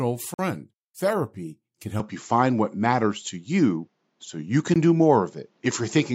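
At 0.34 s the speech drops out for 48 ms and picks up again at 0.39 s. That short hole is likely a Bluetooth stall. Interference held up packets, the headphones' buffer ran empty, and playback sat silent until the resent data arrived. It sounds like a quick gap punched into the speech.

From 2.00 s to the end, the input switched to a poorer device, likely another mic or a headset's call mode. There's no silence at the changeover. The sound just turns duller right away, with nothing above 7.6 kHz, so the top end is shaved off. The level moves by about 5 dB, and a new noise floor comes in, sitting roughly 50 dB under the speech.

A second Bluetooth stall hits at 4.74 s. This one is a tiny 17 ms dropout, likely the same buffer running dry, so it's a very brief cut to silence in the speech.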